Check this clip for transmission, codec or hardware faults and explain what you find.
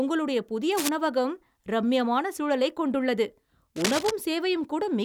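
Two bursts of cable scratch noise, at 0.72–0.89 s and 3.76–4.11 s, the second right after "ரம்மியமான சூழலைக் கொண்டுள்ளது", sitting only a few dB below the speech. Likely a worn cable or connector shifting, its contact resistance jumping erratically. Heard as rough scratching, they show as ragged broadband smears on a spectrogram and jagged spikes on the waveform.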